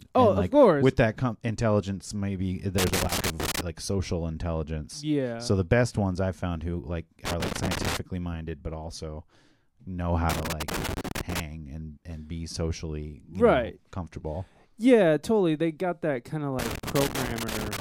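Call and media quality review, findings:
Loose connector crackle in the speech, four bursts. 2.78–3.61 s, after "intelligence maybe". 7.25–7.97 s, after "i've found who like". 10.29–11.40 s, after "know how". 16.59–17.80 s. Probable component: worn or dirty plug or jack in the mic chain. Contact makes and breaks as it moves, chopping the signal into irregular scratchy crackle.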